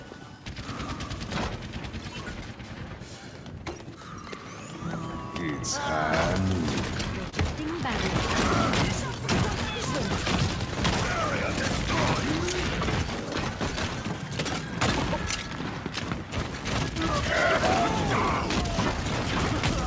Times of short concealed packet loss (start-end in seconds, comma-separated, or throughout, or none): 7.30-7.34